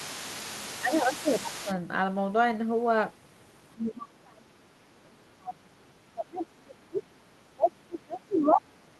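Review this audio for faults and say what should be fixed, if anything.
Other side's voice leaking through, from 0.00 to 1.75 s. A second voice sits faintly under the speech, roughly 15 dB down. The likely cause is loudspeaker sound reaching the microphone and escaping the echo canceller. Fix: use a headset or improve echo cancellation.

Speech suppressed in double talk, at 0.25–1.69 s, 3.74–5.86 s, 6.14–7.05 s and 7.52 s to the end. The speech dips, by around 10 dB first, then near 25 dB. This is likely the echo canceller muting both talkers during overlap. Fix: tune double-talk detection so the near talker is kept.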